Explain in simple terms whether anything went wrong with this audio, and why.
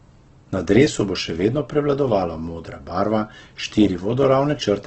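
Yes. From start to finish the speech sounds grainy and rough, with nothing above about 8.2 kHz, which is the mark of Opus compression, likely at a very low setting. Unlike MP3 damage, there is less watery swirling, more a steady coarse, noisy texture.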